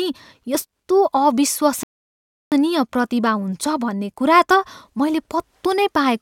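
At 1.83 s the speech halts in a rebuffering stall: playback drained its downloaded audio and waited for more, leaving silence until 2.52 s. About 0.69 s of time is inserted, yet the speech picks up at exactly the syllable where it froze. That continuity separates it from a dropout, where audio goes missing and the resumed speech jumps ahead. Here nothing is skipped, and the clip simply runs longer.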